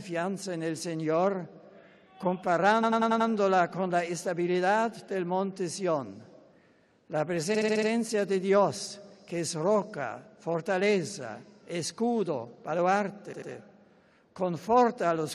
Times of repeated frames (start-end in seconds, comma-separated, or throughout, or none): 2.82-3.29, 7.54-7.88, 13.32-13.50